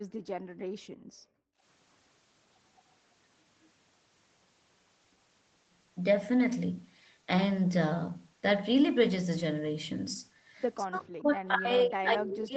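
From 0.0 to 1.62 s, the background is gated by the echo canceller. The room sound drops by up to about 35 dB for around one and a half seconds, then returns.

From 10.85 s to the end, the speech dips hard, by roughly 40 dB. This is likely speech suppressed in double talk, with both sides talking at once.

From 12.3 to 12.39 s, a faint delayed copy of the speech appears, 225 ms late and well below the speech level. This is likely an echo leak through a loudspeaker.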